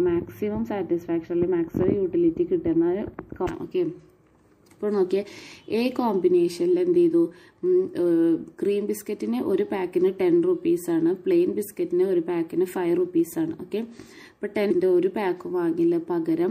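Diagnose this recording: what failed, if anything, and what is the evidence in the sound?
MP3 compression, throughout the clip, at the codec stage. The sound has a watery, swirling texture, the top end is cut off at a fixed point, and sharp attacks are smeared. Bits are too scarce to code every frequency line, so weak lines are dropped and come back from frame to frame, and the treble is removed. The damage is plainly audible, which fits a low bitrate of around 64 kbps in a likely MP3 encode.

Damaged data in a compressed stream, at 3.44 to 3.48 s and again at 14.67 to 14.71 s, at the storage or transport stage. Each event is a brief chirp or blip, about 40 ms long. Some of the compressed bytes there were corrupted. The decoder misread those frames, lost sync, and resumed at the next valid frame header, so a short stretch of audio was garbled or skipped.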